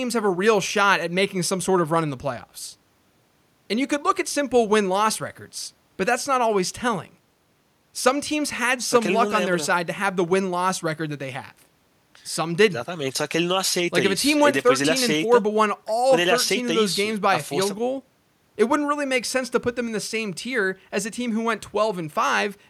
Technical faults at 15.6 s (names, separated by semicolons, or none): none